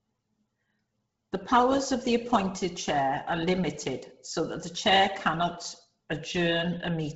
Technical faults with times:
0.00-7.16 Bluetooth LC3 compression

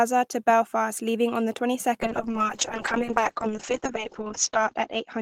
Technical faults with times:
2.02-5.21 call bitrate drop

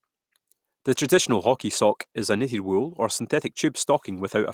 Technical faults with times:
none

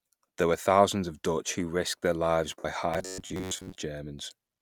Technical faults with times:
2.59-2.65 lost LE Audio frames
2.94-3.78 robotic sound from repeated short buffers

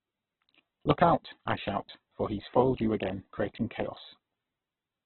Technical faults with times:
0.00-5.06 Opus compression

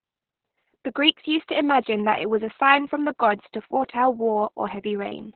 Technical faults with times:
0.00-5.36 Opus voice compression

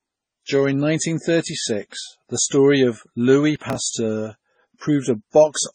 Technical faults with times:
0.00-5.75 transcoding between lossy codecs
3.56-3.75 processor overload crackle

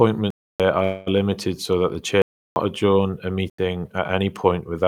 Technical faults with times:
0.30-0.60 block of digital silence
0.83-1.20 call audio freeze
2.22-2.56 block of digital silence
3.50-3.58 block of digital silence

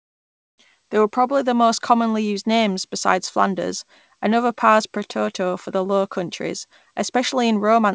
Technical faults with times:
0.00-0.58 comfort noise in place of the background

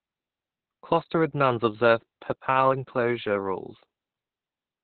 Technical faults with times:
0.00-4.83 Opus voice compression

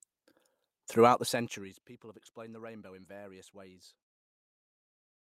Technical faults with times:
4.09-4.19 burst of packet loss

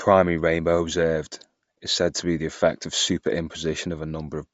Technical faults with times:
0.00-4.54 Bluetooth LC3 compression

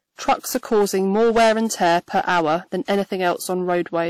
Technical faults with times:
0.00-4.10 hard clipping
0.00-4.10 transcoding between lossy codecs

